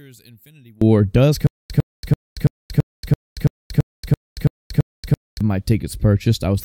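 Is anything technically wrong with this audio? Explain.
Yes, there are two faults in this speech recording. From 0.0 to 0.82 s, one channel inverted, likely a reversed-polarity stereo leg, cancels the shared content in mono, dropping the voice by about 32 dB to a faint trace. From 1.47 to 5.41 s, a stutter with silent gaps, likely a stalling stream replaying its last fragment, repeats a 104 ms burst every 334 ms, with 230 ms of digital silence between repeats, and the speech that should fill that time is lost.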